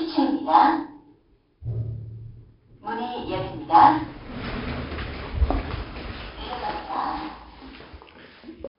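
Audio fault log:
throughout, 4-bit ADPCM compression: coarse 4-bit prediction steps add gritty hiss riding on loud sounds, with heavy damage, and nothing above 5.3 kHz suggests a roughly 11 kHz sample rate.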